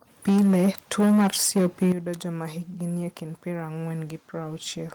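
From 0.27 s to 1.92 s the louder syllables turn harsh and crackly, their peaks flattened against a hard ceiling, roughly a fifth of the waveform cut off. This is microphone overload, likely from input gain set about 8 dB too high for the converter. At 0.29 s the level drops suddenly, voice and background together, by about 3 dB. At 1.92 s it drops again, much harder, by about 11 dB, and the crackle stops. This is the microphone volume being stepped down, likely by call software reacting to the clipping and cutting the input gain.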